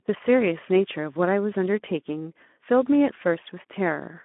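From start to end the speech carries plainly audible Speex codec damage, at a low setting that fits roughly 11 kbps. Starved excitation makes it hoarse and noisy. On a spectrogram, energy sits only between 200 Hz and 3.4 kHz, with blurred, grainy harmonics.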